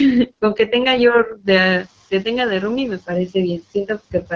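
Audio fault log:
throughout, AMR wideband (HD Voice) codec: speech is coded at 8.85 kbit/s, one of the two lowest rates, so it comes out rough and raspy. Nothing lies above about 7.1 kHz, and the top band is filled with shaped noise, not real detail. Unlike a simple low-pass, the damage sounds grainy.
1.34 to 1.48 s and 4.11 to 4.32 s, speech cut by the noise suppressor: in each stretch about 100 ms of speech is turned down along with the background, by about 13 dB and then about 9 dB at the deepest. The suppressor mistook these parts for noise, so they sound swallowed or faint. The speech itself drops here, not only the background.
1.45 to 1.86 s, noise suppressor catching up: room noise rises about 12 dB near 1.5 s and first comes through with little reduction. Over 410 ms it sinks by about 8 dB as the noise estimate adapts. It is a lagging swell in the background, separate from the swallowed speech just before.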